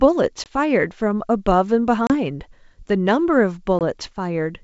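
Packet loss on an ADPCM call knocks the decoder out of step: silent holes at 0.44–0.48, 2.07–2.12 and 3.79–3.82 s, each followed by briefly distorted speech as the decoder settles.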